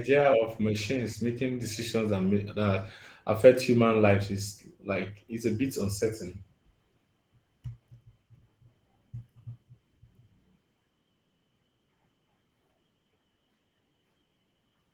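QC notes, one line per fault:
throughout: Opus voice compression. The speech sounds hoarse and slightly robotic. Above 8 kHz the top end is present, which fits hybrid coding at around 16 kbps. A plain low-pass would cut the highs away.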